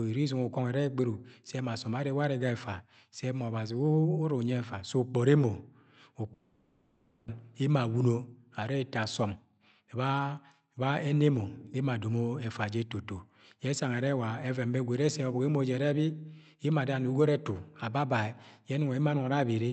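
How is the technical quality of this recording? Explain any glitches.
The speech has two clear glitches: a break in the sound and a later stretch that rushes, both typical of audio carried over a call link whose coding noise and top end near 8 kHz fit Opus at a moderate bitrate.

From 6.33 to 7.30 s the speech turns into a smeared, fading buzz rather than going silent, then resumes with a chunk missing. This is most likely a long network dropout: the receiver stretched the last sound over the gap, and about 0.6 s of speech was lost.

Between 9.24 and 11.71 s the speech sounds hurried, running about 13% fast while the pitch stays the same. This is a jitter buffer speed-up. The buffer held roughly a third of a second too much audio, so the receiver kept trimming tiny pitch-period slices to catch up.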